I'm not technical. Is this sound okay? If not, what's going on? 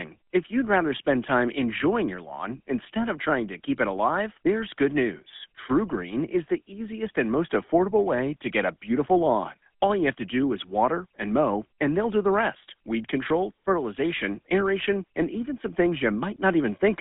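No. Throughout, the speech has passed through the GSM full-rate codec, an old mobile-phone system. It cuts everything above about 3.7 kHz, so voices sound thin, and it adds a buzzy, gravelly roughness. A plain phone-line filter would sound muffled but smooth.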